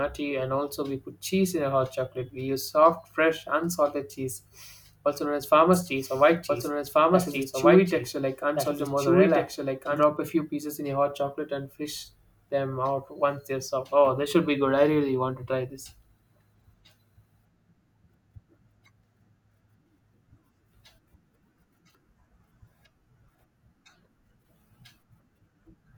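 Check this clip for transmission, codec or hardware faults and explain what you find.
A doubled audio track runs from 5.73 to 10.03 s, likely from a second, slower capture path or an edit holding two out-of-step copies. The speech repeats about one and a half seconds late at roughly equal level, dry and full-band, cutting in and out abruptly.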